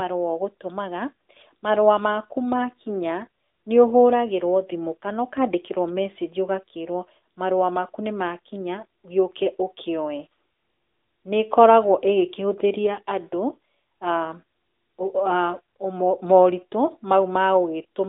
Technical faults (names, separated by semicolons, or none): AMR narrowband mobile codec